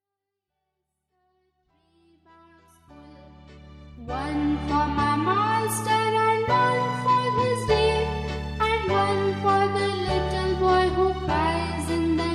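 Nothing's wrong here, just a smooth fade in from the very beginning that's fully up by about 4.74 s, and no technical faults turn up anywhere in the audio.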